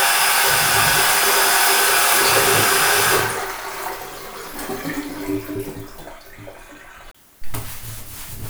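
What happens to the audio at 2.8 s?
Nothing goes wrong at 2.8 s; the sound carries on intact through that moment, with no dropout, click or other fault.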